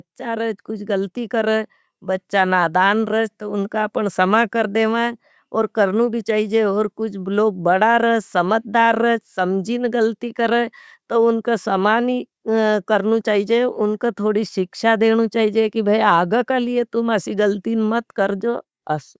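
Speech recorded through call microphone processing, with nothing above 8 kHz. Automatic gain rising: the gain control judged the input too quiet and ramped up, so voice and background swell together by about 7 dB between 0.18 and 4.23 s.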